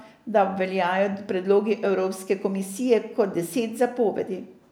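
Nothing in this speech recording points to a technical fault: the signal holds steady throughout, with no dropouts, level jumps or added disturbances anywhere in it.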